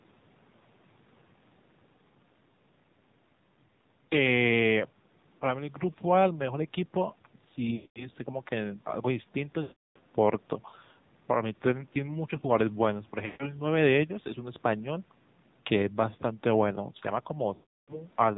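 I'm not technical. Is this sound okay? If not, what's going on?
No, not quite. The whole clip has gone through the AMR narrowband mobile codec, the squeezed voice format old-style phone calls use. It cuts off everything above 4 kHz and rebuilds the voice from a rough model, so the speech sounds muffled, buzzy and a bit robotic throughout.

There are also four spots with lost AMR speech frames: 7.76 to 8.08 s, 9.62 to 9.99 s, 13.26 to 13.52 s and 17.54 to 18.01 s. Chunks of the call signal went missing, so the phone stretched out the last bit of sound while fading it. You hear a smeared, dying-away voice, then a rough return.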